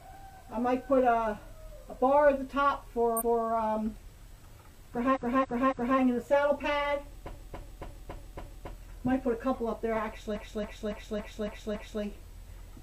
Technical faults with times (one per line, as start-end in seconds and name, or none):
3.16-3.44 repeated frames
5.11-5.95 repeated frames
7.29-8.69 repeated frames
10.31-11.98 repeated frames